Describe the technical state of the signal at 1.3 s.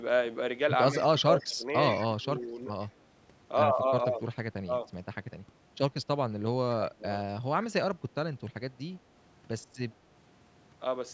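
At 1.3 s you're in the middle of a dip from 0.91 to 1.65 s where the speech gets pushed down, around 20 dB at worst, for about half a second in pieces. That's likely speech suppressed in double talk: the echo canceller mistook the talker for echo while both sides spoke.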